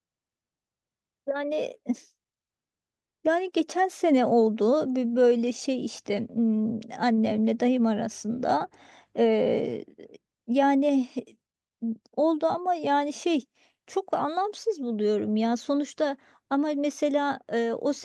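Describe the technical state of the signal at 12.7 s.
At 12.7 s the speech is intact, with no dropout, click, distortion or other fault, only the ordinary character of the call path, whose coding caps the top end at about 12 kHz.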